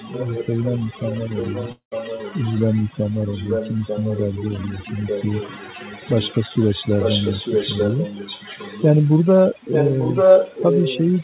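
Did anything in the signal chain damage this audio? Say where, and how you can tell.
Yes. A noise reduction tool was set too strong. Across the whole clip, overdone noise removal leaves a lowered background that breaks up into twinkling specks.

The other side's echo canceller likely left residue, producing an echo leak: a copy delayed about 0.89 s, about 10 dB down from 0 to 9.27 s, then about as loud as the speech from 9.53 s to the end.

A long network dropout, likely packet loss, occurs at 1.72–1.93 s: about 0.2 s never arrived, and the receiver's fading fill gives way to silence before the audio resumes.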